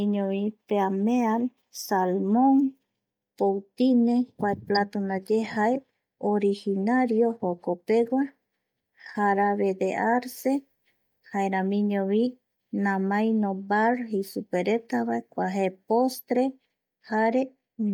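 At about 4.75 to 4.77 s there's a corrupt frame decoded: one damaged frame got played anyway, putting a brief burst of energy at the wrong frequencies into the speech, peaking around -20 dBFS.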